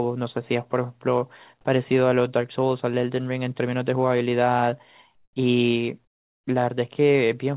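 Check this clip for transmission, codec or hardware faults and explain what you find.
Two short pauses have their background replaced; the path carries nothing above 4 kHz, consistent with G.711 telephony coding.

Comfort noise in place of the background, 5.15–5.36 s and 6.05–6.47 s: the real background becomes steady, featureless noise about 8 dB quieter, likely from discontinuous transmission with receiver-generated fill.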